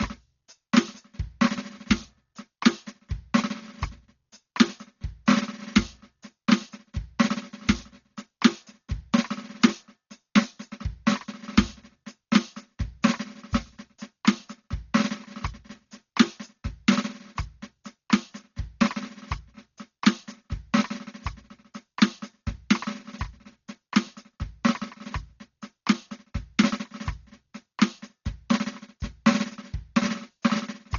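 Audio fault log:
Throughout: Dolby Digital compression, likely, at a heavy setting that fits about 40 kbps. The music sounds dull, with nothing above 7 kHz, and rough fluttering noise clings to tones where starved frequency lines are filled with noise. A spectrogram shows a flat ceiling at 7 kHz and speckled, grainy patches around harmonics.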